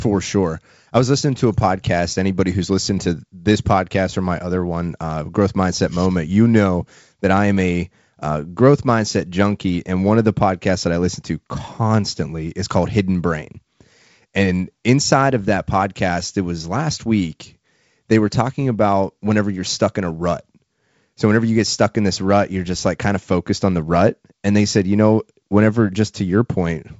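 No technical faults can be heard in this speech recording. The G.722 wideband telephone coding at 56 kbit/s shows only as content that stops around 7.7 kHz and a light grain from the coding.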